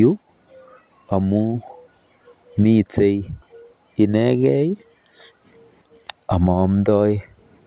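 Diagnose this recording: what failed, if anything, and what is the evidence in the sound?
Nothing in this speech recording points to a failure at any stage. It has come through a working call path, and the absence of any content above 4 kHz fits the narrowband telephone coding of a G.711 A-law link.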